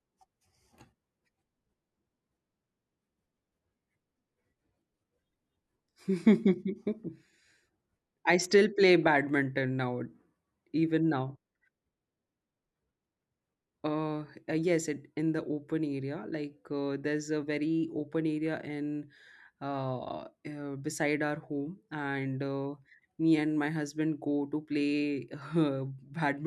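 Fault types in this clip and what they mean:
Nothing in this recording stands out as a technical fault, just the spoken audio coming through as you'd hope.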